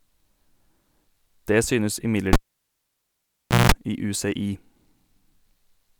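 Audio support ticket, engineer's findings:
Cable pulled and plugged in, 2.33–3.72 s: pop, 1.34 s near-silence, 0.18 s of 60 Hz buzz from tip-only contact, second pop. Buzz separates it from a digital dropout.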